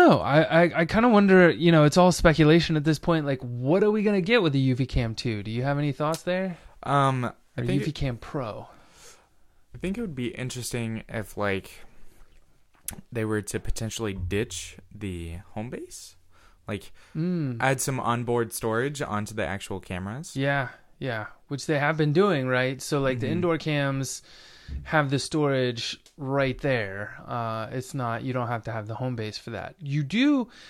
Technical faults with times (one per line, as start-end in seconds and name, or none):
none